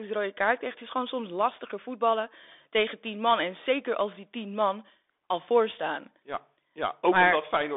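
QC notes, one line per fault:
Throughout, Bluetooth CVSD headset codec: a one-bit delta stream, consistent with a 64 kbps CVSD link, carries the speech in a 300 Hz to 3.6 kHz band with nothing above 3.8 kHz, leaving it thin and muffled, with scratchy s sounds and granular hiss underneath.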